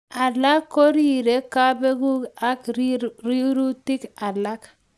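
A steady ticking at 25 per second runs under the speech from start to finish and stops in pauses. This is a resampler restarted on every block: each 40 ms block was converted on its own, apparently from 48 kHz down to 24 kHz, leaving a small error at every block edge.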